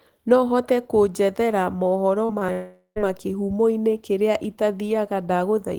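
At 2.25 to 2.31 s, 2.39 to 2.43 s and 2.47 to 2.50 s, short concealed packet loss removes about 40, 20 and 20 ms of audio. The decoder extends the preceding sound across each gap and blends back, leaving brief smears or wobbles in quick succession.

From 2.52 to 2.98 s, a long network dropout follows. The last sound is drawn out as a fading buzz or hiss over the 440 ms gap, ending in roughly 90 ms of near-silence before the speech resumes, likely from a stall in packet arrival.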